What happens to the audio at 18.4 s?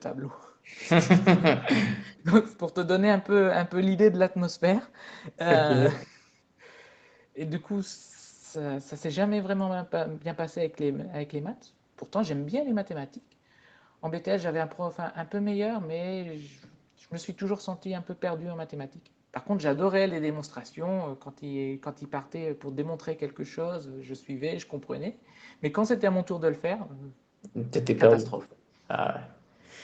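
Nothing goes wrong at 18.4 s: the speech there is intact, carried through the call path with the band ending around 8 kHz, as normal for this Opus connection.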